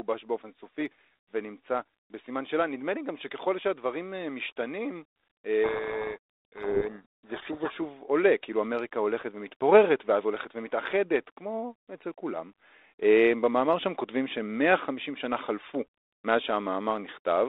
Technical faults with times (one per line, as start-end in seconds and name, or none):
5.64-7.77 codec payload misread